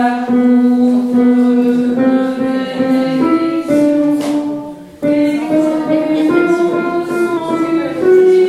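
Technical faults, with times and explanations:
5.42–7.37 s, drift correction step: playback jumps about 5.6% faster, raising pitch roughly 94 cents, then snaps back, likely a clock-matching resampler abruptly adjusting its buffer.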